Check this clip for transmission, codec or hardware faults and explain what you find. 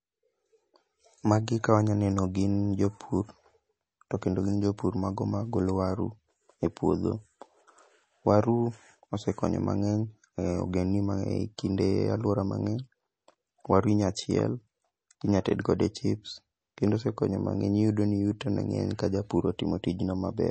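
One codec fault runs through the whole speech clip, and it is most likely MP3 compression. The spectrum stops dead at about 8.3 kHz, and the damage is plainly audible from start to finish: s sounds turn watery and chirpy, and consonant onsets smear. A low bitrate is the cause here. The encoder cut the treble at a fixed frequency and dropped weak spectral lines that flicker between frames, which fits a rate around 32 kbps.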